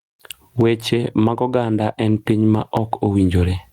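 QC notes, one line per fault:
Throughout, gain pumping. The level swings by roughly 20 dB. Loud and quiet parts sit squashed together. This likely comes from input gain set far too high, with a fast limiter clamping it down.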